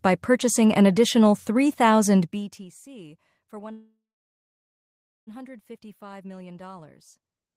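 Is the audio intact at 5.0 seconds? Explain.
No. Packets were likely held up in transit and drained the jitter buffer, causing a call audio freeze from 3.71 to 5.29 s. The last sound fades as a buzz into about 1.3 s of silence, then speech resumes intact, 1.56 s late.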